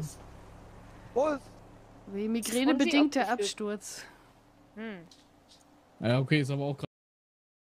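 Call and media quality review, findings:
Cut-off end at 6.85 s: sound stops mid-event, straight to digital silence through the final 0.9 s, no decay tail. Waveform shows abrupt drop to flat silence; spectrogram a hard vertical edge. Final buffers never written or played out, capture/playback stopped early.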